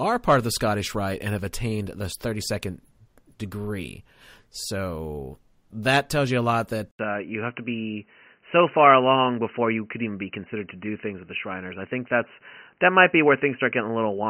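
Right after "tells you a lot", at 6.91 s, there's a short gap of about 80 ms, and from then to the end the speech sounds dull and boxy, with nothing above 3 kHz. The loudness barely changes, but a faint new noise sits well under the voice. That combination of a brief dropout, a narrower band and a different noise floor is likely an input switched to a poorer device, such as a headset's call profile taking over.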